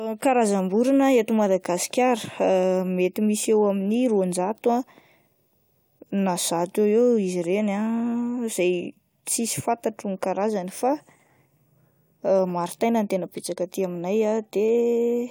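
No technical faults are audible anywhere in the recording. The speech carries on without any break or audible problem.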